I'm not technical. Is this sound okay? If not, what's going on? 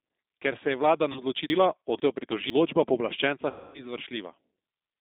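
No. Throughout, the speech sounds thin, rough and slightly robotic. That is the G.729 codec, a phone-call compressor that keeps only the range from about 250 Hz to 3.7 kHz and rebuilds the voice synthetically.

Right after "se je vlada", from about 1.12 to 1.21 s, the voice briefly turns into a fading buzz or noise. That is VoIP packet loss concealed by the speech codec: about 40 ms of audio went missing, and the decoder stretched the last sound to fill the gap. The same happens for longer, from 3.50 to 3.87 s, where roughly a quarter second was lost and the voice smears into a fading buzz or noise before recovering.

Between 1.5 and 2.5 s, the speech sounds jumbled. That is chunks out of order: a half-second piece arrived late and plays after the piece that should follow it.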